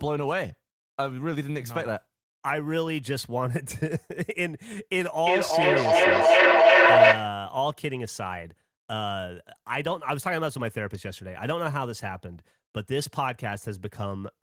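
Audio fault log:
5.17–7.45 s, feedback howl: a microphone-to-loudspeaker loop gains level each pass, narrowing to a tone near 700 Hz that pulses roughly every 400 ms and peaks about 12 dB above the speech. A spectrogram shows one bright horizontal band, and the waveform a swelling, throbbing envelope.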